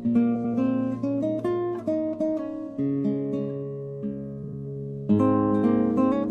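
Frames out of order: adjacent frame runs were decoded swapped, at 0.35–0.54 s and 4.43–4.53 s, so each stretch plays with its halves exchanged, a garbled flutter.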